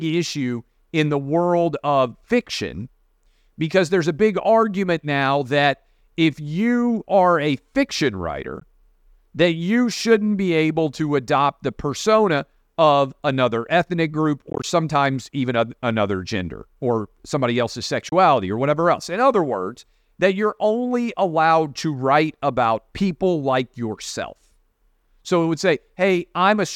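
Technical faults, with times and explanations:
8.60–8.62 s, 14.50–14.64 s and 18.09–18.13 s, Bluetooth dropout: the sound cuts to silence for about 13 ms, then at 14.5 s several 13 ms gaps totalling 67 ms are scattered over 133 ms, and then 27 ms. These are likely wireless packets lost in transit, each lost packet about 13 ms long. The speech picks up further on, as if it had kept playing, which sets it apart from a stall that resumes where it stopped.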